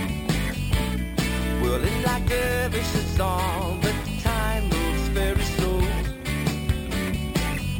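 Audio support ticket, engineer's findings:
Imaging from sample-and-hold upsampling, whole clip. Metallic fizz about 18 dB below the signal, lowest image spanning 6 to 12 kHz, level tracking the sound, moving opposite to pitch, unlike distortion harmonics. Fits 12 kHz source held up to 44.1 kHz without smoothing filter.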